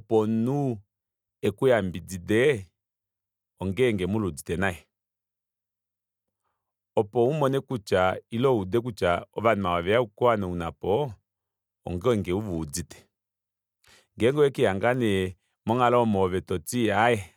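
No technical faults audible.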